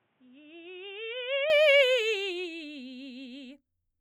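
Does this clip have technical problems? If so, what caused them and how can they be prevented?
Yes. From 0.0 to 1.5 s the music is cut off above 3.8 kHz, about 5 dB quieter, with new hiss; likely the input switched to a poorer device. Unlike a filter, level and noise change with the band. Prevent it by locking the input device before recording.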